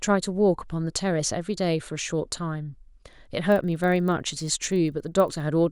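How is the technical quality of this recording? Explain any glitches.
One glitch affects the speech near the end. Resampler restarted on every block, 3.48 to 5.4 s: each 40 ms block was converted alone, so its edge errors make a 25 Hz buzz riding the speech.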